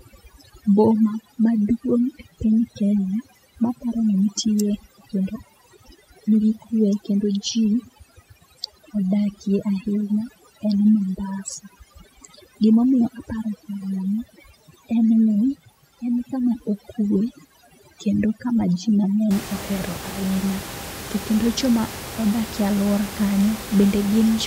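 From 0 to 19.3 s, overdone noise removal: the noise reduction is set too aggressively against room noise sitting about 13 dB below the speech, so frequency bands near that level are cut to nothing, taking quiet speech detail along. Gaps become near-silent with twinkling specks.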